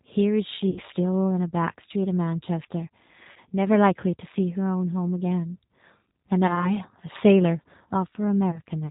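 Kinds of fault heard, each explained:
G.729 codec: an 8 kbit/s speech codec that rebuilds the voice from a vocal tract filter, a pitch predictor and sparse pulses. Here it leaves the whole clip plainly rough and synthetic, with nothing above 4 kHz. Unlike a simple low-pass filter, the texture itself sounds rebuilt rather than merely muffled.
VoIP packet loss concealed by the speech codec: at 0.70, 3.32, 6.47 and 8.51 s, the decoder covers gaps of about 60, 40, 20 and 20 ms by extending its last pitch and filter. Each gap becomes a brief, fading buzzy tone or coloured noise, and the voice stays weak or distorted just afterwards.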